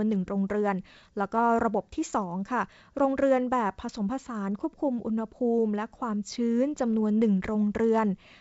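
No technical faults can be heard in this speech, which carries the wideband telephone sound of G.722 coding, with the band reaching up to about 7 kHz and no more than a faint trace of coding hiss in the upper range, as fits its full 64 kbit/s mode.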